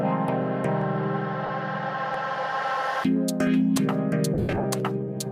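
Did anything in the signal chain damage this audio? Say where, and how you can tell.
Yes, two separate problems.

At the buffer stage there's a regular click around every 1.33 s, roughly four of them from about 0.82 s to 4.8 s. That steady spacing is the giveaway for clock drift buffer slips. The most likely cause is two devices running on independent clocks a few hundred ppm apart, so the buffer between them creeps until a small block, something like 15 samples, gets dropped or repeated, and each slip clicks.

The Bluetooth link also dropped lost LE Audio frames. First is a short patch at 1.46 to 1.49 s, about 30 ms, which fits three 10 ms frames. Second is rougher, 4.34 to 4.64 s, with about 190 ms missing scattered over 300 ms and the longest gap around 70 ms. You hear the LC3 concealment filling those gaps by replaying the last spectrum with scrambled signs, so the sound turns into a noisy smear that fades off during the longer runs.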